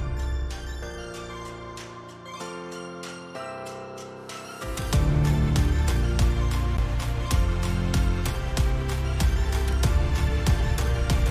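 At 6.77 s there's a CD skip: the laser lost its track and landed on another turn of the disc's spiral. You hear a tiny tick where the player mutes for roughly ten milliseconds, then the sound picks up abruptly from a different point.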